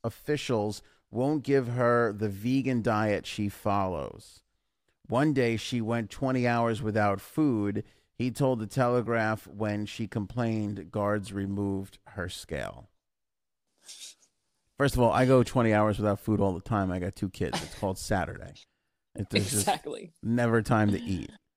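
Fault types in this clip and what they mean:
Clock slip clicks: A fast, even rattle of tiny ticks runs through the whole speech from 0.10 to 21.54 s, one every 30 ms or so, several hundred in all. Each is a single-sample jump, likely from two devices running on unsynchronised clocks that differ by roughly 700 ppm. The strict regularity and the tiny size of each tick set this apart from dropouts or buffer glitches, which come at uneven moments and remove audible chunks.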